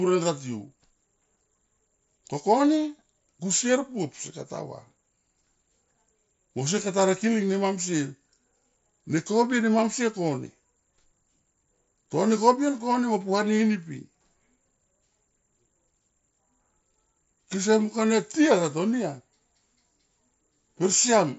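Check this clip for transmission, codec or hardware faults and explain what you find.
No transmission, codec or hardware faults found; the speech is band-limited to about 7.7 kHz with light grain on louder passages, as expected from a working mSBC Bluetooth headset link.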